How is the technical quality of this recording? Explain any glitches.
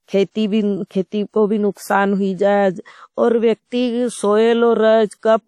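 The quality is held back by plainly audible compression damage throughout the speech. The cause is likely WMA compression at a rate that fits 48 kbps. Long transform blocks are coarsely quantised, so the speech rings and sounds washy, with hiss breathing along with it and nothing above 17.1 kHz.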